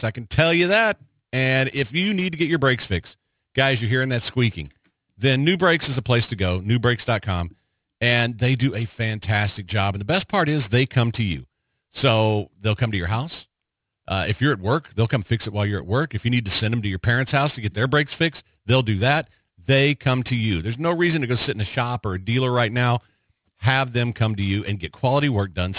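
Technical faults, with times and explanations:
Throughout: aliasing. The speech was brought down to a much lower sample rate without first removing the high frequencies. The fold point sits at 4 kHz, which fits a rate of 8 kHz. Sibilant energy above that line did not vanish. It mirrored back below 4 kHz at wrong, unrelated pitches. Esses and other hissy sounds come out gritty and metallic. The spectrum runs hard up to the 4 kHz edge. The folded energy sits about 20 dB under the speech.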